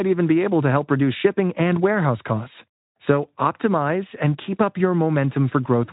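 No faults are present in this speech recording; the audio carries nothing above about 3.8 kHz.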